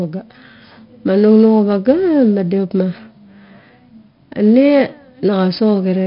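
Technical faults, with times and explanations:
Throughout, 4-bit ADPCM compression: each sample is a coarse 4-bit step from a prediction, so the speech carries heavy gritty hiss tracking its loudness, crunchy attacks, and nothing above 5.3 kHz, which fits an 11 kHz sample rate at about 44 kbps.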